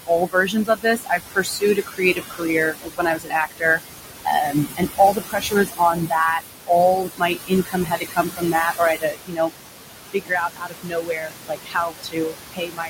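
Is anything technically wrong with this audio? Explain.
Yes. Noise suppressor artifacts run through the whole clip: the suppressor pulls bands it judges to be steady noise down by about 20 dB frame by frame, so the room noise, only about 6 dB under the speech, dips between phrases and swells beneath them.

Speech cut by the noise suppressor happens at 0.26–2.45 s, 2.71–3.8 s, 4.45–6.14 s, 7.03–9.52 s, 10.07–12.36 s and 12.52 s to the end. The suppressor mistakes low-level speech for noise and attenuates it by about 19 to 22 dB, so parts of each span sound swallowed or faint.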